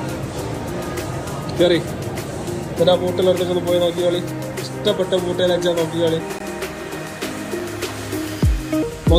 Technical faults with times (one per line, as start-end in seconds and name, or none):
0.16 damaged data in a compressed stream
6.20 damaged data in a compressed stream
6.39 block of digital silence
7.59 block of digital silence
8.83 damaged data in a compressed stream